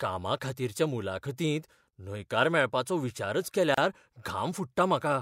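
A gap at a join of encoded pieces opens in this speech clip from 3.74 to 3.78 s, right after "मुलाखतींत न्हयकार मेळपाचो विचारच". A gap of about 31 ms opens, its edges smeared by the codec, then the sound resumes exactly where it left off. Two separately encoded segments were butted together untrimmed, so the first one's padded final frame and the second one's encoder start-up delay both survive as dead air inside continuous speech.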